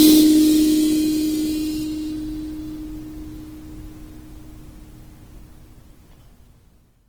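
A music clip with Opus compression running its full length: tones come across rough, grainy and noisy rather than clean. What separates this from MP3 damage is that it swirls less and leaves few watery holes in the spectrum. Starved bands are filled with folded or noise-like content instead, so the top end stays present up to about 20.2 kHz. The plainly audible damage likely comes from the music mode being pushed to a low rate, which fits roughly 16 kbps.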